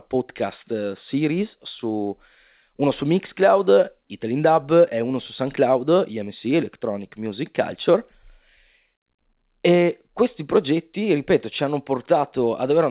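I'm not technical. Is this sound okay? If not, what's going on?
Yes, nothing's wrong with this speech recording; it uses standard G.711 telephone coding, so it has the narrow, phone-line sound of an ordinary landline call.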